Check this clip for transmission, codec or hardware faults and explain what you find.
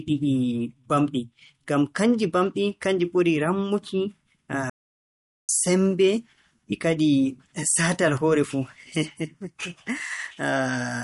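Two faults are audible in this speech: MP3 compression damage running through the whole clip, and a playback stall just before the midpoint.

For the entire duration the speech sounds watery and swirly, with sibilants turning metallic and chirpy and consonant onsets smeared. The treble is cut off at a fixed frequency, so the top of the spectrum is simply missing. The likely cause is MP3 compression at a low bitrate, around 48 kbps. Starved of bits, the encoder cuts the treble at a fixed frequency and drops weak frequency lines that flicker on and off between frames.

From 4.70 s to 5.49 s the sound stops dead in mid-flow, leaving about 0.79 s of silence before it carries on. That is a playback stall. The likely cause is that the player ran short of incoming data, or its audio thread was held up, so the output fell silent until the buffer refilled and playback resumed.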